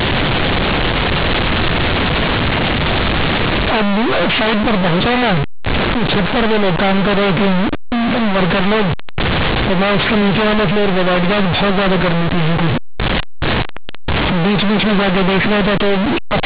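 Speech over an A-law telephone link, affected by companded audio read as linear throughout. The A-law bytes are played as plain 8-bit samples without expansion. Quiet passages become as large as loud ones, giving loud buzzy distortion and heavy noise in pauses.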